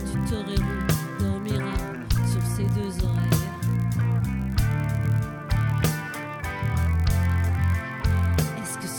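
A block size mismatch (padded) runs through the entire clip. The audio carries a steady buzz at 46.9 Hz, which fits a 1024-sample read buffer. The writing stage delivers slightly shorter blocks, so the reading stage fills the remainder of each block with zeros. That inserts a tiny silent gap once per block, producing the periodic buzz. Playback is slowed to 0.999 times normal speed, too slight to hear, and pitch stays essentially unchanged.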